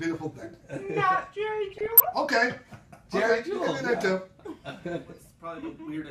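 From 1.71 s to 2.03 s there is DAB burbling. Residual bit errors, at a rate of roughly under one percent, have slipped past the error correction into the MP2 audio data. Corrupted samples put short blips of noise into single sub-bands, and corrupted scale factors make individual sub-bands jump in level for up to a frame, with 16 frames damaged in all. The result is a burbling disturbance laid over the sound for about a third of a second.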